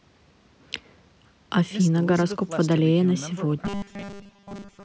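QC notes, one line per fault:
3.65 to 4.84 s, robotic sound from repeated short buffers: the voice collapses into a stiff metallic buzz pitched at 200 Hz and runs that way to the end. A repeat period of 5 ms matches that buzz, so the likely cause is the playback side being starved of new audio and looping its last tiny chunk, with well over half of this stretch filled by repeats instead of real speech. The call-style high-pass that takes out the lowest bass stays in place under it.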